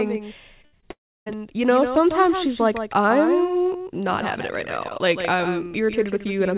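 Throughout the speech, a fainter copy trails roughly a tenth and a half of a second behind, about 10 dB down. This doubled audio track is likely a second capture or misaligned edit. From 0.62 to 0.87 s the sound turns choppy and robotic, with four short holes patched by repeating what came before: repeated packet loss. From 0.91 to 1.37 s a brief fading buzz gives way to silence before "you know sometimes she's" resumes, the missing stretch never returning, likely a long network dropout. All of it sits in a narrowband call sound with nothing above 4 kHz.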